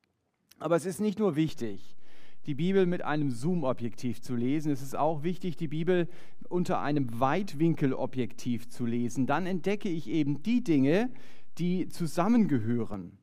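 At 1.49 s a DC step occurs: the waveform's zero line jumps to a new offset, as when a converter recalibrates or an offset input is switched in. It holds until 12.94 s. The step gives a low thump, while the speech continues unaffected.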